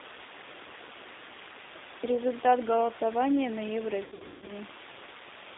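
From start to end the speech carries G.729 codec damage, which points to an 8 kbit/s codec rebuilding each frame from a filter, pitch predictor and a few pulses. It sounds rough and slightly synthetic, and a spectrogram shows nothing below about 250 Hz or above 3.7 kHz.

Between 4.04 and 4.52 s, VoIP packet loss is concealed by the speech codec. About 340 ms went missing across 440 ms, the longest gap 160 ms, which fits 20 ms packets. The decoder stretches its last sound into a fading buzzy tone or coloured noise, seen as smeared, decaying energy and a shrinking waveform envelope.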